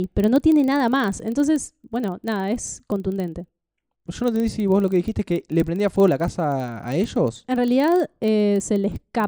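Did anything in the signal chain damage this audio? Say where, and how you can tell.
Yes. A filter in the block-based processing stage is being restarted on every block, and it affects the whole clip. Throughout the speech there is a steady 25 Hz buzz whose loudness rises and falls with the level of the voice. That points to 40 ms processing blocks. Because the filter's state is cleared at each boundary, every block starts from silence and begins with a small transient. Those repeated transients merge into the buzz.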